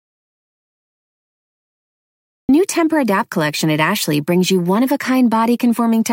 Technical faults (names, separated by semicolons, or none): audio dropout to silence